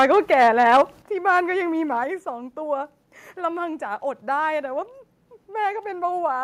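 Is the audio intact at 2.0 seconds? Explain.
No. At about 2.04 s the microphone volume stepped down. The call software likely judged the input too hot and cut the device's capture level in a single step of about 4 dB. The speech and the background behind it drop together, abruptly, with no fade, so the level after 2.04 s sits about 4 dB lower than just before it, as if someone turned the input down.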